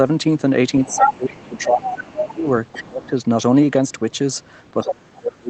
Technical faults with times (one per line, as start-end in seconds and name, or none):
0.83-3.09 other side's voice leaking through
0.85-3.15 speech suppressed in double talk
4.79-5.49 speech suppressed in double talk
4.88-4.94 other side's voice leaking through